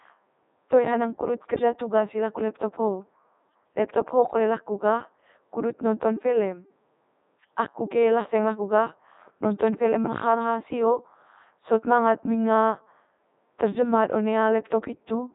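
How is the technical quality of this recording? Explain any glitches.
The technical quality is poor throughout, because the whole recording has passed through a Codec 2 vocoder. The decoder rebuilds speech from transmitted pitch, voicing, energy and spectral-envelope parameters using sine waves, so the original waveform is gone. The result is robotic and buzzy, with heavy damage and nothing above 3.8 kHz, at the codec's top rate of about 3.2 kbit/s.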